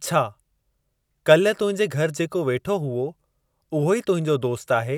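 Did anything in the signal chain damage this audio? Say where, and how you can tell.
No, nothing in the signal chain damaged this speech.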